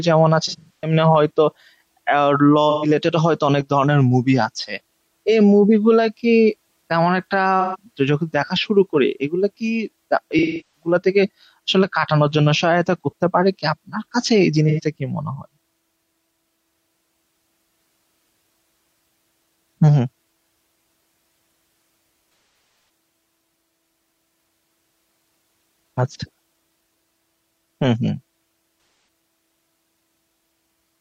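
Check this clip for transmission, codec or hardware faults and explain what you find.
The speech has one recurring transmission fault. AAC frame loss with concealment occurs at 0.48–0.93, 2.70–2.89, 7.60–7.76, 10.38–10.94, 14.69–14.80, 22.29–22.89 and 28.78–29.08 s. Missing AAC frames are rebuilt by the decoder from the last intact spectrum, giving brief smeared, noisy, phasey patches. Gaps run from about 85 ms to 512 ms, with the losses at 0.48 s and 22.29 s scattered, where the longest unbroken runs are roughly 150 ms and 300 ms.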